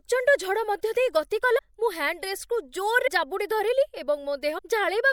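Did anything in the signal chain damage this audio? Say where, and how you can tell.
Yes. Compressed frames were skipped in decoding at 1.57, 3.06 and 4.57 s, jumping roughly 100, 70 and 400 ms in 24 ms frame steps.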